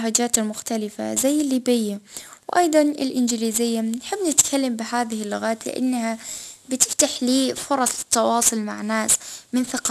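Aliasing runs through the whole clip: the speech appears to have been resampled to a lower rate with no anti-aliasing filter beforehand, which fits a drop from 44.1 kHz to 24 kHz. Content above 12 kHz, the new fold point, reflects back down as false tones at unrelated frequencies, sitting perhaps 15 dB under the signal. The sibilants come out gritty and metallic, and the spectrum stays dense right up to the 12 kHz band edge.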